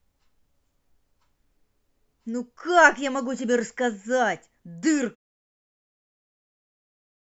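No technical faults are audible in the speech, and the smooth fade-out that begins at about 5 s and is complete by 5.16 s is a deliberate editorial taper with no click or hard edge.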